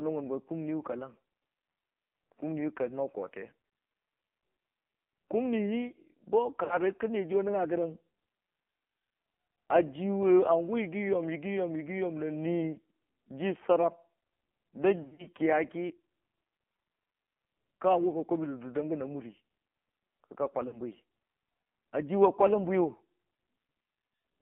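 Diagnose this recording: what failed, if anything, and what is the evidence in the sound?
The codec stage failed throughout. The speech passes through an AMR narrowband mobile codec, cut to a 200 Hz to 3.4 kHz line band with heavy buzzy, synthetic coloration that fits a low bitrate mode near 5.9 kbps. On a spectrogram, everything above 3.4 kHz is empty, and the harmonics look smeared.

The network stage dropped speech. There are lost AMR speech frames at 3.66–3.72 s, 6.64–6.78 s and 20.68–20.80 s, and scattered losses over 15.02–15.28 s. The decoder stretched the previous sound with falling gain, so the waveform shows a brief sustained, fading patch at each of these times before the speech returns rough.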